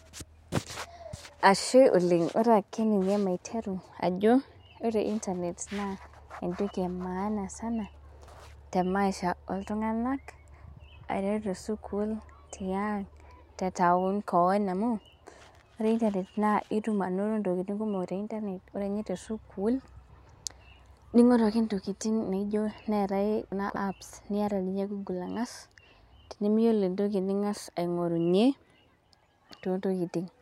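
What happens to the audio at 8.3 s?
At 8.28 s a 60 ms chunk of audio was delivered one chunk late, so it plays after the chunk that should have followed it. The result is chunks out of order between 8.28 and 8.40 s. No audio goes missing, but the two 60 ms pieces swap places, leaving hard joins at the start, the middle and the end of that span. The speech there sounds briefly jumbled.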